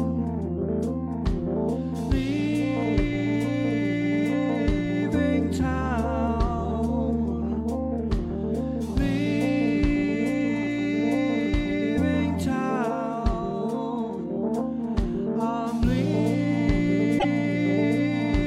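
From 17.18 to 17.25 s the audio skips ahead into a chirp, noise burst or gap, likely a broken MP3 bit reservoir after dropped frames.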